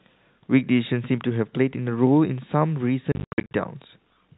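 A speech recording carried over G.711 telephone coding, so nothing above 4 kHz comes through. From 3.12 to 3.53 s there is packet loss filled with silence. Across that 420 ms stretch, about 280 ms of audio drops out in scattered holes. The longest run is 80 ms. The gaps have hard edges. Their sizes step in small even units, which fits 10 ms packets. The receiver had nothing to play, so it inserted silence.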